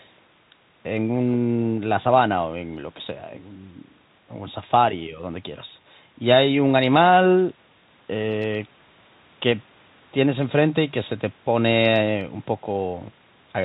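The speech carries no technical faults, and its content stops at about 4 kHz, which fits a narrowband telephone-style call path such as G.711 mu-law running at 64 kbps.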